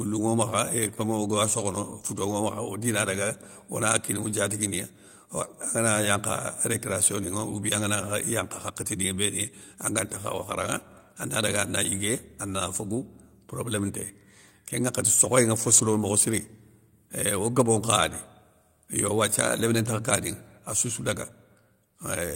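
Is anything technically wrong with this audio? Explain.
Yes. At 15.73 to 15.79 s, just after "nŋa fo", the speech briefly turns rough and grainy but never drops out. This is a lost packet rebuilt from error correction. About 40 ms of audio, which fits two missing 20 ms packets, never arrived. The packet that followed carried a low-bitrate duplicate of that stretch, and the decoder played that coarser copy instead of leaving a gap. The swap is what you hear as the short patch of noisier, degraded texture.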